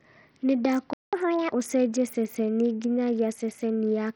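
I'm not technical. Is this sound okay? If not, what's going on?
No. The speech has three problems.

The first runs through the whole clip and sounds like Bluetooth SBC compression. The top end is thin and keeps flickering in and out, and a gritty, hissy roughness clings to the speech. The likely cause is the basic codec Bluetooth uses to send audio to headphones, squeezed hard: it splits the sound into a few frequency bands, gives the faint high bands almost nothing, and stores the rest coarsely.

The second is a playback stall. At 0.93 s the sound cuts out in mid-flow and stays silent for about a fifth of a second, until 1.13 s. The player most likely ran short of audio data, or was briefly held up, and output nothing until it recovered. It then carries on from where it stopped rather than skipping ahead.

The third follows straight on as a catch-up at higher speed. From 1.13 s to 1.52 s the speech plays one and a half times too fast, and because speed and pitch rise together it sounds roughly seven semitones higher, a little chipmunk-like. 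The player is rushing through the audio that piled up during the gap to get back on schedule. After 1.52 s the speed and pitch return to normal.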